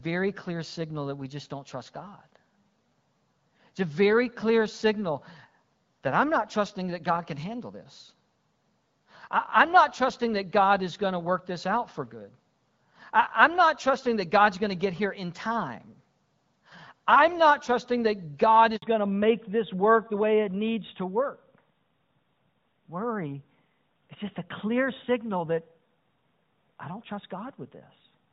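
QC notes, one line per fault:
18.76 to 18.82 s, handover gap: the sound cuts to silence for 60 ms while the call is passed from one network to another. No speech frames reach the receiver during the switch, so whatever was said in that instant is simply missing.
18.82 s to the end, fallback to narrowband: immediately after the gap the upper band disappears and nothing above 4 kHz remains. The voice turns duller and rougher. This fits the call leaving HD Voice, heard before the switch as lightly coded wideband speech, for an older narrowband codec near 12.2 kbit/s.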